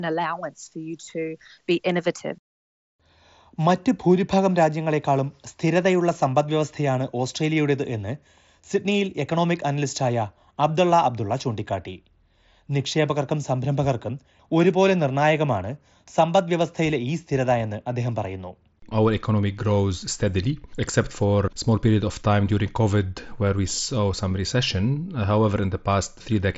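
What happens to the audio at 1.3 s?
Nothing goes wrong at 1.3 s: the speech there is intact, carried through the Bluetooth mSBC headset codec as it should be, with nothing above about 7.7 kHz.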